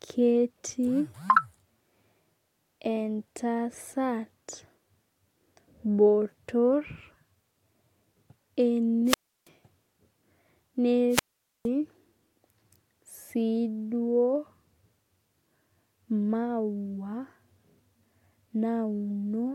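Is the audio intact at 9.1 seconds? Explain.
No. From 9.05 to 9.48 s a wireless microphone squelch dropout occurs: the FM radio signal fades, the receiver's squelch mutes the output for about 330 ms, and the speech returns. On a waveform this appears as a flat gap, and on a spectrogram as a blank vertical band.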